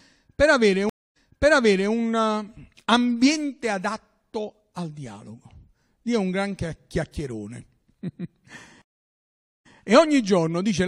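Stream reconnects occur at 0.89 s and 8.82 s. After "per avere" the connection drops, leaving 260 ms of silence. A fresh decoder then picks up 766 ms earlier, so speech repeats before "eh ambiente". The second break is silent for 833 ms and resumes 93 ms back.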